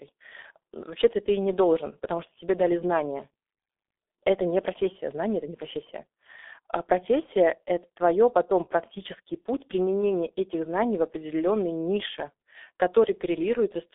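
From start to finish the speech carries G.723.1 codec damage, which fits a 6.3 kbit/s stream. Long 30 ms frames and a sluggish voice model leave it muffled and hoarse with smeared consonants. A spectrogram shows energy confined to roughly 300 Hz–3.6 kHz, empty above 3.8 kHz.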